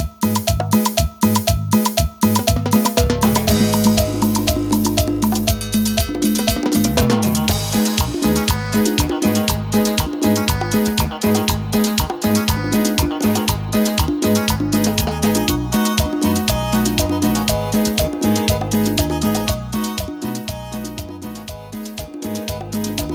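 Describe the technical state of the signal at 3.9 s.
At 3.9 s the signal is intact, with no audible technical fault.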